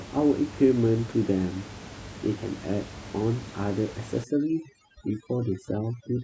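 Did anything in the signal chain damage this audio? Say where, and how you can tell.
Yes. From 4.24 s to the end of the clip, overdone noise removal sets in at the call-processing stage: an aggressive suppressor gates individual frequency bands near its noise estimate, so the room noise, about 16 dB below the speech, collapses into near-silence with twinkling specks.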